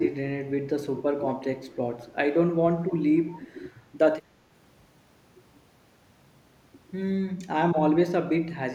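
The speech dips at 1.71 to 1.76 s, 2.04 to 2.11 s, 2.84 to 3.45 s and 7.35 to 7.39 s, by about 10 to 15 dB. Both sides talking at once likely caused this speech suppressed in double talk. From 3.29 to 3.52 s, a faint copy returns 223 ms late, about 25 dB down. This is likely an echo leak from a loudspeaker the echo canceller missed.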